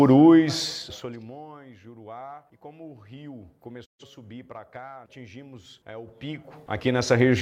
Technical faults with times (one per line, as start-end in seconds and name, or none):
3.84-4.04 digital broadcast dropout